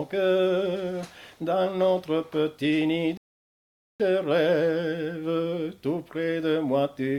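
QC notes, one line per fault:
3.17–4.00 s, rebuffering stall: the player runs out of downloaded audio and stops, adding 0.82 s of silence, then resumes exactly where it paused, so nothing is lost. The waveform shows a flat dead gap, and the spectrogram a blank vertical band with hard edges.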